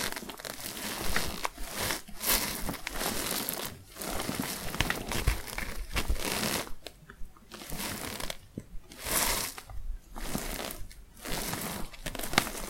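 A recording of sounds. At 3.66 s the sound jumps forward abruptly, with no gap of silence. Roughly 30 ms of audio is missing. This is likely a dropped buffer (overrun), where samples were overwritten before being read.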